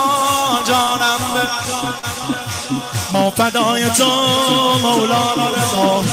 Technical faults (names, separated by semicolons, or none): short concealed packet loss